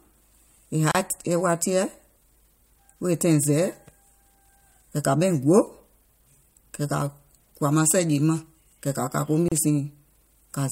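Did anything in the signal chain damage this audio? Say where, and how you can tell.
Yes. This is damage at the codec stage: a gap at a join of encoded pieces, heard twice in the speech, at 0.92–0.95 s and at 9.48–9.52 s just after "kɛ̀ kȧ kȧ ko". Each is a gap of about 33 ms with smeared edges, and the sound resumes exactly where it stopped. That comes from separately encoded segments being joined with their start-up delay and final-frame padding left in. Packet loss would drop sound instead of inserting a pause.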